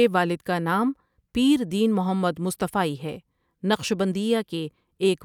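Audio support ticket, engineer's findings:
Listened to the speech clip end to end and found nothing to flag, so no fault to log against any component on this one.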